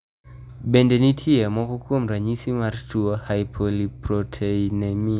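No technical faults are audible anywhere in the speech.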